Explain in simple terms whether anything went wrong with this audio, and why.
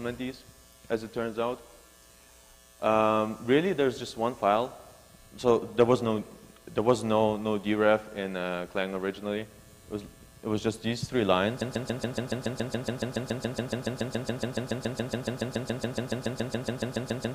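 Something in the playback or streaming chain most likely stalled at 11.61 s and kept replaying the last scrap of audio it held. The result is a broken-record loop: a tiny piece, about 0.14 seconds long, repeats back to back 41 times in a row and lasts until the clip ends. Whatever should have been heard during those final seconds is missing.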